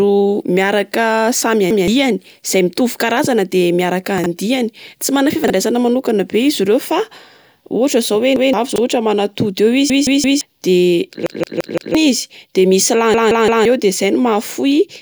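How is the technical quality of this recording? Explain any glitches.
The speech is marred by two kinds of playback fault: repeated stutters that grow worse toward the end, and a few brief jumbled moments.

Repeated buffer: a piece of about 171 ms plays again with a hard join, heard as a stutter at 1.71–1.88 s, at 8.36–8.53 s just after "ohatra zao hoe", then more severely at 9.90–10.41 s, 11.26–11.95 s and 13.14–13.65 s, where it repeats three or four extra times. New audio arrived late, so the device replayed its last buffer (a length that fits an 8192-sample buffer). Roughly 150 ms of speech is lost in the early cases, and about half a second or more in the later ones.

Chunks out of order: tiny garbled moments occur at 4.18–4.26 s, 5.44–5.50 s and 8.72–8.78 s. A 20 ms chunk arrived late and played two or three chunks after its proper place (three at 4.18 s, two at the others). Nothing is missing, but the wrong order leaves three hard joins per event, so the sound briefly scrambles.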